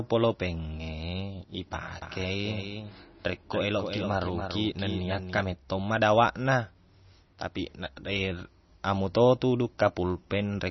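From start to finish the speech sounds watery and swirly, and nothing is heard above 5.9 kHz. Sibilants chirp metallically and attacks smear. The likely cause is heavy MP3 compression, which fits a low bitrate near 28 kbps. The encoder dropped the treble and zeroed weak frequency lines.

From 2.02 to 5.40 s a second full-band copy of the speech trails about a third of a second behind. It is a few dB quieter and has no decay or room colour. It starts and stops abruptly. This is likely a doubled audio track, with two copies mixed out of step.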